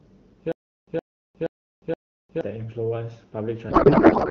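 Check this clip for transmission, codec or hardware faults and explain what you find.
Two faults stand out in this speech clip, carried over AMR-WB at 12.65 kbit/s, where the codec's own coloring is light.

From 0.52 to 2.41 s there is a stutter with silent gaps. A burst of about 117 ms repeats four times, each followed by about 356 ms of digital silence, so it returns every 473 ms. The likely cause is a stalled player replaying its last fragment at each retry. Unlike packet-loss concealment, the repeats are identical and the gaps are truly empty.

From 3.69 s to the end there is a codec payload misread. Octet-aligned AMR is being decoded as bandwidth-efficient, so the decoder finds its fields at the wrong bit positions. The speech turns into garbled noise and warble that barely tracks it, unlike low-bitrate AMR roughness, which still follows the speech.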